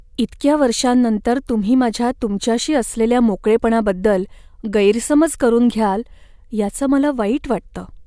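Nothing technical stands out in this speech recording; there's no fault to point to anywhere in it.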